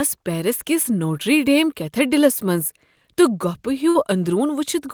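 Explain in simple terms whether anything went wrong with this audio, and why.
A short run of network packets carrying the speech was lost or arrived too late, a burst of packet loss at about 3.89 to 3.97 s. With nothing to play, the receiver stretched the last bit of sound it had for about 53 ms, letting it fade out. When the stream picks up again, the speech jumps ahead, so about 60 ms of the original speech is missing and there is a brief smeared or cut-off moment.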